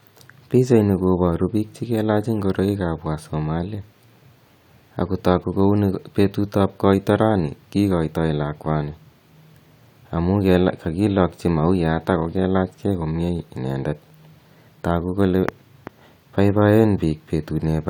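No technical faults can be heard anywhere in the recording; the signal stays steady and continuous throughout.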